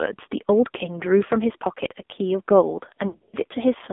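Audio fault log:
Throughout: AMR narrowband mobile codec, heavily squeezed at what sounds like a low bitrate around 5.9 kbps, so the speech comes out buzzy and synthetic, with a thin band of roughly 250 Hz to 3.6 kHz.
1.28 s: lost AMR speech frames, a single 20 ms frame dropped, so the decoder patches it from the last good frame and you get a quick dip or warble.
3.08 to 3.45 s: lost AMR speech frames, about 180 ms gone in bursts spread over some 240 ms, longest run 60 ms, giving smeared, fading stretches and a weak or rough recovery.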